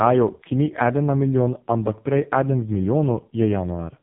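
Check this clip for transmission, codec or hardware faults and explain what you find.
One codec fault runs through the whole clip: AMR narrowband mobile codec (AMR-NB) compression, heavy. The audio passes through 8 kHz sampled coding in 20 ms frames, where a vocal-tract filter is driven by sparse pulses rather than by the waveform itself. The damage points to one of the lowest AMR-NB modes, around 5 kbps. Nothing survives above 3.8 kHz, so the speech sounds muffled and telephone-like. The starved pulse excitation makes it buzzy and synthetic.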